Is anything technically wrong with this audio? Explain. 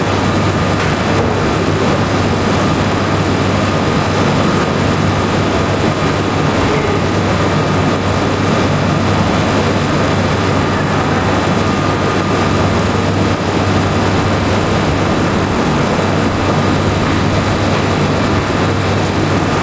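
Yes. Throughout the clip there is gain pumping. The input gain was likely set far too high, with a fast limiter or compressor dragging the level down whenever a loud sound arrives. The level ducks by around 5 dB under every loud event, so loud and quiet moments sit unnaturally close together and the sound feels squashed and breathing. The call path itself passes nothing above 8 kHz, which fits G.722 at 64 kbps.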